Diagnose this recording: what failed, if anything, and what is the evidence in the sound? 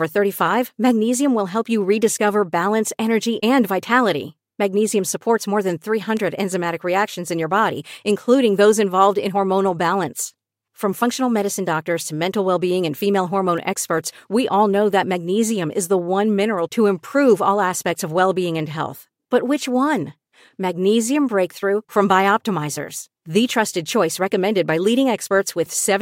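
Bit error spikes point to a digital storage or link fault: a flipped bit sent a sample, or a few adjacent ones, jumping by a power of two and straight back. This gives two sharp broadband ticks unrelated to the speech, at 6.17 s (about -14 dBFS) and 13.58 s (about -20 dBFS).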